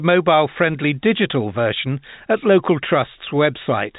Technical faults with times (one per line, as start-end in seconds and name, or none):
none